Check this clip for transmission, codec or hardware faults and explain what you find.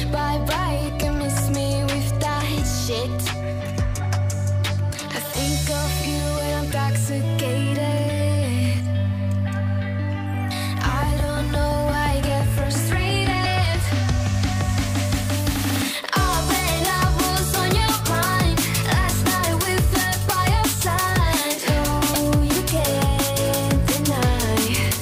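Two brief glitches are present, both damaged data in a compressed stream. At 13.42 to 13.46 s and again at 22.12 to 22.16 s, a short blip of about 44 ms cuts through the audio. Corrupted bytes there made the decoder misread its frames, lose sync and hunt for the next valid header.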